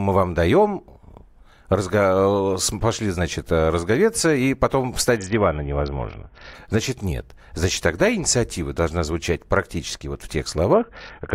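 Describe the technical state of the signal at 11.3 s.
A Bluetooth SBC bit pool drop runs from 10.73 s to 11.35 s, starting right after "звучать практически вот в". The link squeezed the encoder's budget, which fits a bit pool falling from 31 to 6, near 55 kbps. The upper sub-bands starve, so the speech turns dull and gritty.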